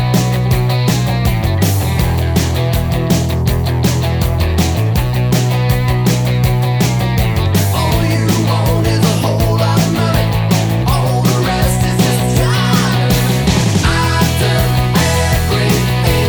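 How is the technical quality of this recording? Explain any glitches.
Nothing here sounds like a glitch; the recording runs along smoothly without any technical faults to point out.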